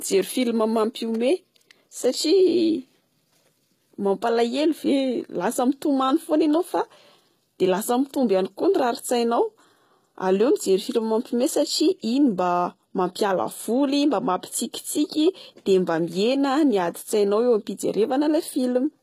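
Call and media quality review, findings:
HE-AAC compression, full length of speech. Sibilants gritty, lispy, metallic. Likely cause: HE-AAC v2 at a bitrate around 20 kbps, with spectral band replication copying lower bands upward so treble harmonics misalign. Spectrogram: smeared, repeated-looking texture above crossover, hard ceiling at 14.9 kHz.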